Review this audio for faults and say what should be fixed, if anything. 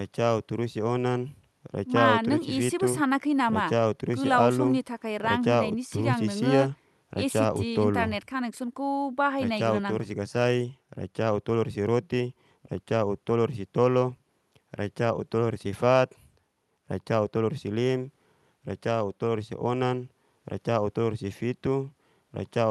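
Nothing in this speech recording needs fixing. The sound has gone through a call path, and the top end stops at about 12 kHz, which fits an Opus codec working normally on a call link.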